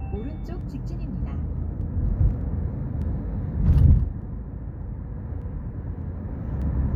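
From 0.61 s to 6.62 s, a click recurs every 0.6 s, about ten in all: clock drift buffer slips, likely from two clocks disagreeing by several hundred ppm, dropping or repeating a dozen-odd samples each time. A spectrogram shows evenly spaced thin vertical lines; the waveform shows step discontinuities.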